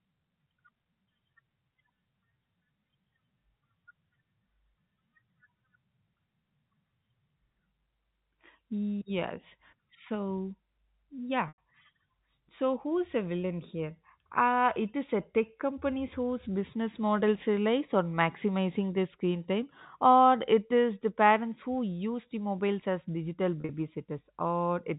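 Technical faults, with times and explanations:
11.48 to 11.58 s, packet loss with pitch repetition: About 100 ms of audio drops out, which fits ten 10 ms packets. The receiver repeats the last pitch period to fill the gap. The sound holds briefly, turns buzzy, then fades toward silence before speech returns through a short cross-fade.
23.61 to 23.69 s, packet loss with pitch repetition: Just after "the mobiles as digital", about 70 ms is lost across 80 ms. The longest run is 40 ms. The short repeats give a held, buzzy stutter. The narrow 4 kHz telephone band stays intact around both gaps.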